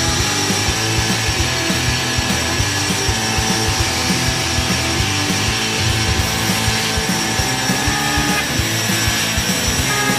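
No technical faults are audible.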